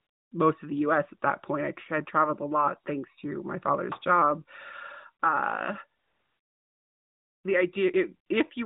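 Speech heard through a narrowband mobile codec with light coding damage, nothing above 4 kHz, and a sound consistent with AMR-NB at about 12.2 kbps. AMR comfort noise fills 0 to 0.32 s and 5.99 to 7.44 s, where speech frames stopped and a steady synthetic hiss stood in. On a spectrogram these spans show smooth, featureless noise with abrupt edges.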